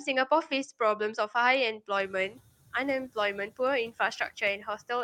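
At 1.97 s you can hear the noise suppressor catching up. The room noise jumps by about 17 dB around the two-second mark, and the suppressor's noise estimate is still tuned to the quieter background, so the new noise comes through with less reduction at first. Over the next 380 ms, until 2.35 s, the estimate adapts and the noise sinks by about 7 dB; after the rise the room noise sits roughly 23 dB below the speech.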